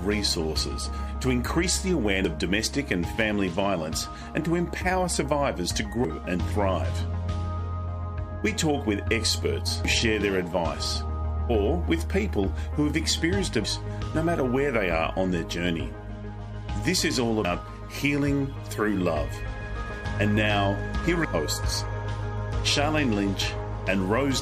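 At 2.25, 6.05, 9.85, 13.65 and 17.45 s the sound skips forward, with roughly a fifth of a second gone each time. This is likely audio missing between chunks of about 4 s. On the waveform and spectrogram, each joint appears as an abrupt seam with no silent gap.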